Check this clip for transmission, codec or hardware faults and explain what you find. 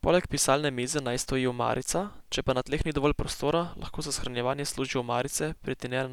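No faults are audible here.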